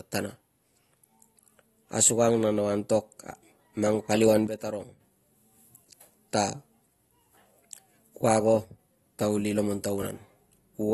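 Throughout, the speech sounds dull and smeared, with fizzy sibilants and nothing above 12.5 kHz, likely AAC compression at a rate that fits about 32 kbps. From 4.47 to 5.00 s the speech and background noise drop together by about 9 dB, and from 8.64 to 8.79 s, just before "ta kuli", by about 6 dB. Each is a sudden gain jump, likely a gain change applied without a ramp.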